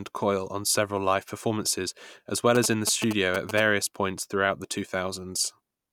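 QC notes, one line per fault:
2.55–3.60 s, GSM signalling bursts: a nearby 2G phone sends short groups of radio bursts, and the audio circuit rectifies them into a galloping dit-dit-dit of brief buzzes repeating at 216.7 Hz, sitting only a little below the speech level.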